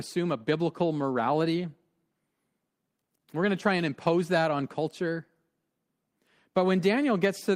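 No technical faults occur anywhere in the speech, so there is nothing to describe in time order.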